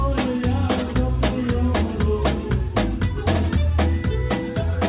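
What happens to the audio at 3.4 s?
Nothing goes wrong at 3.4 s: the audio runs on intact through that moment, with only the steady narrowband character of the call path, nothing above 4 kHz.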